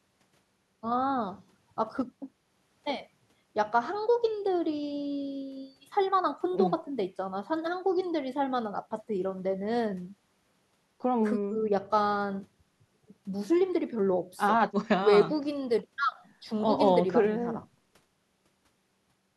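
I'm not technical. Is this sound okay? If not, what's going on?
Yes, it sounds fine: nothing stood out as a problem when I listened to this recording of speech.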